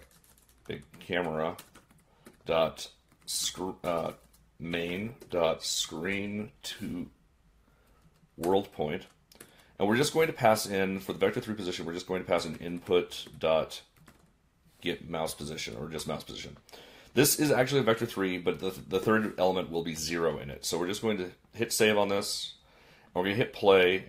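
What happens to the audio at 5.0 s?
At 5.0 s the playback is partway through an adaptive stream at a lower bitrate. From 1.26 s to 7.26 s the stream switches to a cheaper encoding, consistent with a step down from about 64 to 16 kbit/s Opus. With far fewer bits to spend, coding artefacts thicken. The quality changes abruptly at both edges, with no gap.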